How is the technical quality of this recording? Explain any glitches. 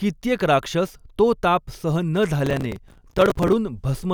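The recording has one glitch. From 2.46 to 3.53 s, processor overload crackle: dozens of few-millisecond buffers miss their deadline and replay old audio, making sustained gritty tearing rather than one isolated click.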